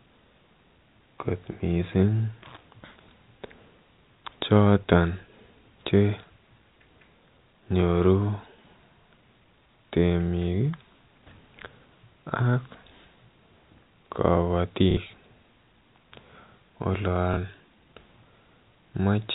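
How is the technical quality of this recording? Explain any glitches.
The speech has two brief glitches from packet loss with the last packet repeated, heard within a telephone-band sound that stops at 4 kHz, as G.711 coding does. At 14.91 to 14.97 s about 60 ms went missing, and at 17.34 to 17.37 s about 30 ms, which fits 30 ms packets. The receiver filled each gap by replaying the last packet it had, and the longer gap becomes a short robotic stutter. Unlike a dropout, there is no silence.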